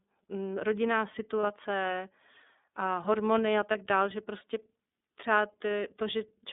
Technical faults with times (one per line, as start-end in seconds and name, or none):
0.00-6.53 iLBC codec
1.41-1.44 lost iLBC frames
3.71-3.75 lost iLBC frames